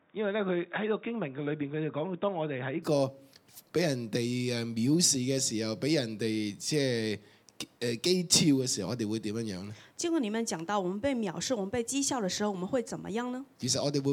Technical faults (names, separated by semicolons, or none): input switched to a poorer device